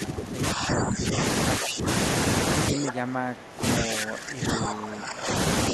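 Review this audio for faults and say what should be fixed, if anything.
The speech keeps dipping, by up to around 20 dB at its worst, at 0–1.2 s, 1.58–1.87 s, 2.71–3.64 s, 3.8–5.33 s and 5.70–5.73 s. That's speech suppressed in double talk, likely the echo canceller turning this side down because it couldn't tell it apart from loudspeaker echo while the far end was talking. To fix it, tighten the canceller's double-talk detection so near-end speech survives, or have people use headsets so there's little echo to cancel.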